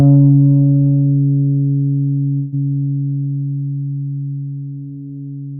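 At 2.35 s the sound stops moving forward for about 0.19 s and the last instant is stretched into a fading buzz, with no drop to silence. This call audio freeze was likely caused by delayed packets emptying the jitter buffer. Playback then resumes where it stopped, about 172 ms late, with nothing lost.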